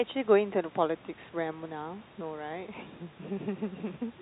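Nothing stood out on listening to this speech recording.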